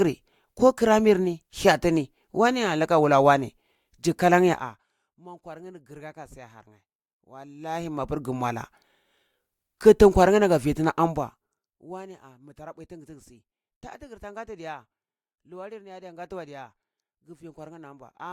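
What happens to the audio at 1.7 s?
Nothing goes wrong at 1.7 s; the speech carries on intact through that moment, with no break, distortion or sudden jump in level.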